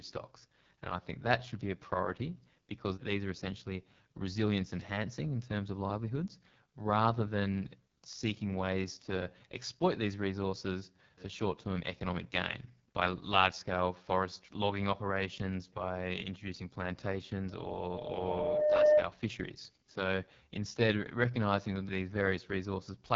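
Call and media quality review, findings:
AMR wideband (HD Voice) codec, whole clip: rough, raspy speech, nothing above about 7.4 kHz. Sounds like AMR-WB at its lowest rate, roughly 6.6 kbit/s, so the vocal model is starving.

Loudspeaker feedback squeal, 17.48 to 19.06 s: a 604 Hz tone swells over about a second and a half to roughly 10 dB above the speech. Mic is catching its own loudspeaker.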